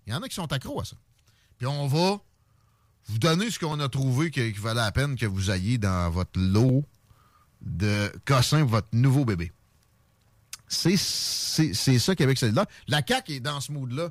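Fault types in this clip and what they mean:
Clock drift buffer slips: Clicks recur every 1.49 s through the speech, from about 0.75 s to 12.63 s, roughly ten in all. The steady spacing likely comes from two devices running on separate clocks that disagree by something like 700 parts per million, so the buffer between them periodically drops or repeats a short block of around 50 samples. Unlike packet loss or random dropouts, the glitches arrive at a fixed interval.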